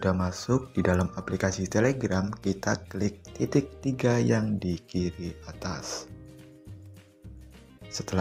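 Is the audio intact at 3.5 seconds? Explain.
Yes, the audio at 3.5 seconds is intact, with no dropout, click, distortion or other fault at that moment.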